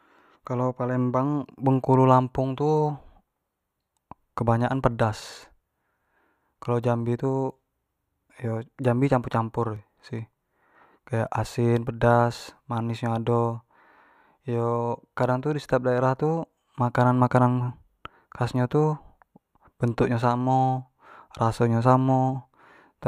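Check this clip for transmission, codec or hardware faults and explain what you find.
A single fault appears at 9.76 s, just after "jambi tu campur campur": the speech jumps forward a millisecond or two with no gap. This is likely a dropped buffer (overrun), where samples were overwritten before being read and the surrounding audio was spliced together.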